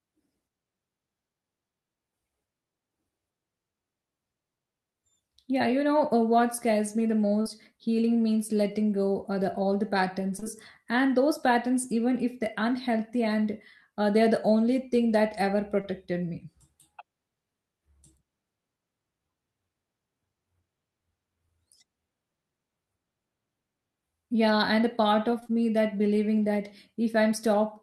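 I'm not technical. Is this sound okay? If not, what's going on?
No. The speech has short concealed packet loss at 7.41, 10.39 to 10.47, 15.81 and 25.39 to 25.51 seconds. Tiny bits of the call arrived too late, and the receiver filled them in, so you hear a brief smear or wobble.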